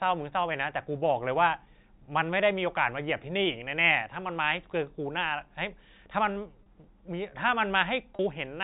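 A brief buzzy hold, as if the sound briefly sticks on one pitch, appears at 6.63 to 6.66 s and again at 8.16 to 8.19 s in this telephone-band speech. Each is packet loss with pitch repetition. About 30 ms of audio went missing each time, which fits a single lost packet, and the receiver filled the hole by repeating the last pitch period. The gap was short enough that the repeat covers it, with no silence.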